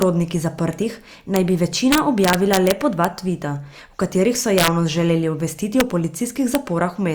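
Integer overflow cracks hit this speech at 0.02, 1.36, 1.92 to 3.05, 4.58 to 4.68, 5.8 and 6.55 s. Peaks pushed about 0 to 2 dB past the integer limit. They wrapped to the opposite sign instead of clipping. Each wrap gives a violent, sharp crack.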